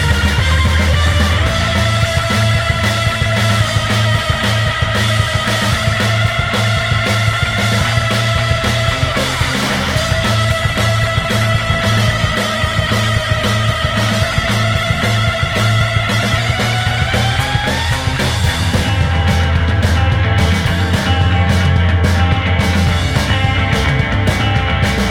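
From 10.68 s to 18.73 s the sound turns rough and watery, then muffled as the top end disappears for about 6 s. This is a call bitrate drop: the encoder was starved of bits, consistent with a fall from about 96 kbps to 20 kbps.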